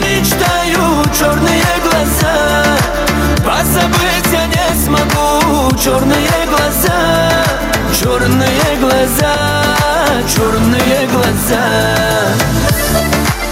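Gain pumping runs right through the clip. The level ducks by about 5 dB under each loud moment, so everything sounds squashed. That's likely the gain set far too hot, with a fast limiter clamping down on each peak.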